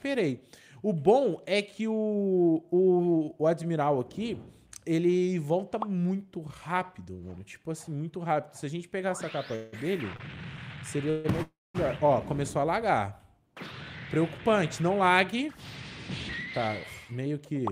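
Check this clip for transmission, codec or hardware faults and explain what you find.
Three kinds of network trouble show up here, all in the second half of the clip.

From 9.55 to 11.26 s there are repeated stalls (stutter): packets arrived late four times and the jitter buffer ran dry each time. The receiver stretched the last sound over 342 ms in total, the longest gap lasting 171 ms, so the audio drags and hiccups with nothing actually lost.

Right after, from 11.42 to 11.76 s, there's a call audio freeze. The sound hangs for 320 ms and the last 220 ms of that goes silent. The likely cause is packets held up in transit, which pushed a gap into the audio before it picks up where it stopped.

Then come two stretches of jitter buffer speed-up as the receiver trims the built-up delay by cutting short pitch-period slices. From 14.80 to 15.48 s it runs at 108% speed and drops about 50 ms. 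From 16.58 to 17.71 s it runs at 106% and drops about 70 ms. The pitch stays the same, but both stretches sound slightly rushed.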